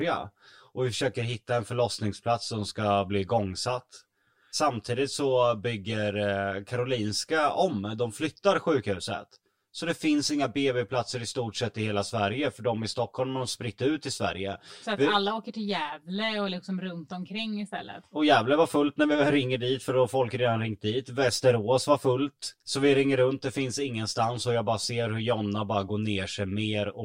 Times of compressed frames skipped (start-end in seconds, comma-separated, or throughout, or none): none